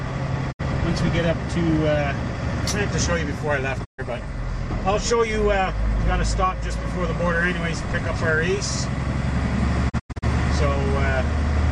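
Digital broadcast dropouts hit at 0.51–0.61 s, 3.84–4.00 s and 9.88–10.24 s. Bad frames force the receiver to mute, with 20 ms fades. The first two gaps lose 64 ms and 128 ms. The last breaks into several holes, losing 192 ms.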